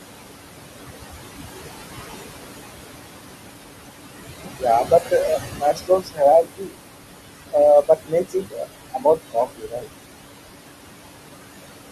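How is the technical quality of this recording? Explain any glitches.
The recording carries noise suppressor artifacts throughout and several stretches where the suppressor cut into the speech itself, over room noise only about 9 dB below the voice.

Noise suppressor artifacts, throughout: the suppressor pulls the steady background down by about 20 dB band by band, so the noise sinks between the words and rises under them.

Speech cut by the noise suppressor, at 4.84–5.12, 5.53–6.21, 6.43–6.75, 7.82–8.64 and 8.94–9.87 s: mistaking quiet speech for noise, it drops parts by up to about 20 dB, swallowing them for up to half a second.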